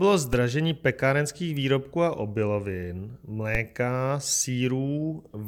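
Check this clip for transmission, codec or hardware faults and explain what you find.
Two low thumps stand out, one at 0.33 s and another at 3.55 s, each a brief dull knock under the audio while the sound carries on unaffected. Both are DC steps: the waveform's zero line jumps suddenly, by about -16 dBFS, as if an offset had been switched into the signal path. A 20 Hz high-pass then drains the offset away, so the step sags back toward zero rather than holding, leaving the sharp onset as the audible thump.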